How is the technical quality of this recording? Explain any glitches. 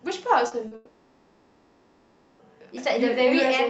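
The recording has clear network damage. There are two brief concealed gaps early on and one long dropout that takes out most of the middle. The audio sounds like it came through a call codec, plausibly Opus at around 32 kbps, and the top end stops at about 8 kHz.

Short concealed packet loss occurs twice, from 0.47 to 0.54 s and from 0.67 to 0.74 s. Each time, about 40 ms of audio failed to arrive in time. The receiver bridged the gap by extending the last sound. Voiced parts keep their pitch and unvoiced parts become shaped noise, then the real signal fades back in. Each gap is heard as a quick smear or wobble, and a short consonant may drop out.

A long network dropout is the likely cause of the stretch from 0.75 to 2.42 s. About 1.64 s of audio is missing. Nothing in the gap goes fully silent. Instead, the last sound is drawn out as a synthetic buzz or hiss that fades. The speech returns at 2.42 s, and whatever was said during the gap never comes back.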